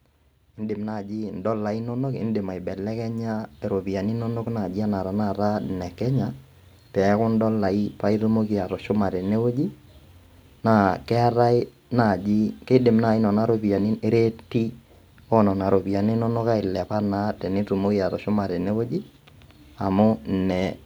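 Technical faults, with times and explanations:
0.56–5.99 s, automatic gain rising: the gain control judged the speech too quiet and raised its level by about 12 dB over roughly five seconds, so speech and background noise swell together. The waveform envelope widens steadily, and the spectrogram's noise floor brightens with it.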